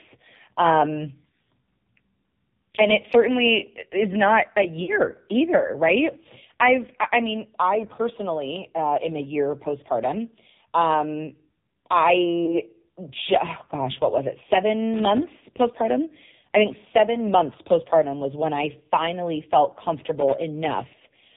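AMR narrowband mobile codec, throughout: the speech is band-limited to 4 kHz and heavily buzzy and synthetic, which points to a low mode around 5.9 kbps.

Lost AMR speech frames at 4.84 to 4.97 s, just after "certainly is not a", and at 12.46 to 12.60 s: the decoder stretched the previous pitch and vocal-tract settings at falling gain, causing a brief drawn-out warble and dip. The first gap fits two missing 20 ms frames, the second one.

Loose connector crackle at 14.94 to 15.23 s, between "gosh what was it" and "postpartum I think seven", and at 20.18 to 20.44 s, after "when I finally felt": an intermittent contact chopped the signal into irregular bursts of scratchy crackle.

Lost AMR speech frames again at 20.88 to 20.94 s: a short concealment warble and dip, consistent with two dropped frames.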